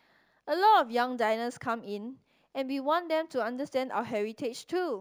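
Throughout the speech, imaging from linear upsampling dulls the top of the band, consistent with a straight-line rise from 16 kHz to 44.1 kHz. A faint mirrored copy sits between 8 and 16 kHz, roughly 35 dB down, visible on a spectrogram and heard as metallic shimmer on sibilants.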